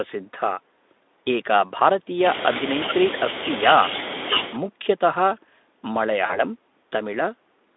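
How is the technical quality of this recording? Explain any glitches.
One glitch stands out: a short dropout near the end of the speech. From 6.25 to 6.44 s there is VoIP packet loss concealed by the speech codec. About 40 ms of audio went missing, which fits two lost 20 ms frames. The decoder filled the gap by repeating its last pitch and filter with falling gain. The sound is stretched into a buzzy tone or a coloured noise that fades. It stays weak or distorted after the packets resume, because each frame builds on the damaged one before it.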